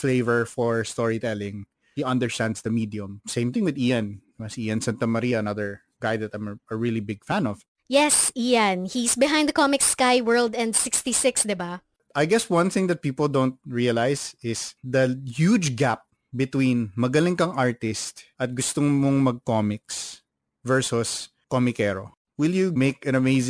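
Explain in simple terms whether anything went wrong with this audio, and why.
The hiss of s and sh sounds comes across gritty and metallic from start to finish, with harsh tones that don't belong to the speech. This is aliasing. The recording seems to have been converted to a lower sample rate, which fits a drop to around 22 kHz, without first removing the highest frequencies. Anything above about 11 kHz couldn't be stored, so it folded back down as false, unrelated pitches.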